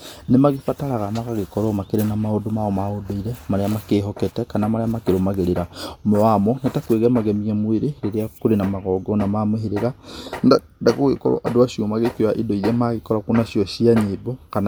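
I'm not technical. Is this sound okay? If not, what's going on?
Yes, nothing in this recording stood out as a problem when I listened to it.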